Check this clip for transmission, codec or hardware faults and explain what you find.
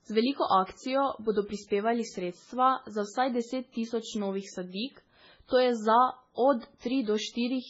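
The speech shows heavy MP3 compression throughout, with nothing above about 7.7 kHz. The band limit and the degree of damage point to a very low bitrate, likely around 16 kbps. Starved of bits, the encoder cuts the top of the spectrum and drops weaker frequency lines that flicker in and out from frame to frame, giving a watery, swirling quality with smeared attacks and chirpy sibilants. On a spectrogram this shows as a hard ceiling near 7.7 kHz and patchy, blotchy gaps in the energy below it.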